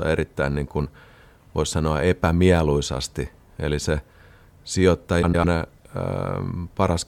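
From 5.22 to 5.45 s the speech breaks into a brief garbled flutter, the sign of frames out of order. Two neighbouring blocks of roughly 104.5 ms each, which fits runs of four frames, were decoded in swapped sequence, so the stretch plays its second half first. Nothing is lost in time. A spectrogram shows formant tracks jumping backwards, with vertical seams at the start, midpoint and end. The waveform shows abrupt envelope steps at those three joins.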